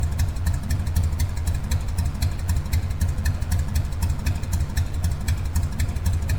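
A mains buzz runs through the whole clip. Sharp switching spikes, twice per 50 Hz cycle, leak into the signal path. Their harmonics climb into the kilohertz range. The result is a steady, raspy buzz, sitting about 20 dB below the sound.

Generation loss also affects the entire clip. The sound is swirly, smeared and hollow, and attacks are blurred. Nothing reaches above 19.9 kHz. The likely cause is around ten rounds of lossy re-encoding, which fits MP3 at 128 kbit/s. Each pass requantised the audio and stacked up noise and spectral holes.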